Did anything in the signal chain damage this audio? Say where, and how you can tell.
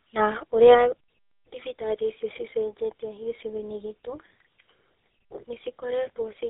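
Yes. At the codec stage, tandem speech coding: AMR-NB at 10.2 kbit/s was decoded to G.711 mu-law, then re-encoded as GSM full rate. The second coder compounds the first's errors, so the speech sounds rough, muffled and warbly throughout, with nothing above 3.8 kHz.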